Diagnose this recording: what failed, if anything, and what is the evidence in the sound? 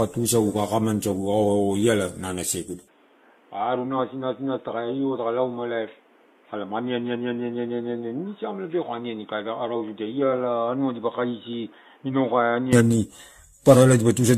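Codec stage. The speech sounds swirly, smeared and hollow from start to finish, with blurred attacks. Nothing survives above 14.1 kHz. This is generation loss, likely from around seven repeated AAC-LC passes at 64 kbit/s. Each pass requantised on a shifted frame grid, compounding noise and spectral holes.

Capture device stage. At 2.88 s the sound abruptly turns dull and boxy, with no gap. The band stops at 3.8 kHz. Level falls about 10 dB. A new noise floor sits roughly 30 dB down. Full band returns at 12.73 s. This points to input switched to a poorer device.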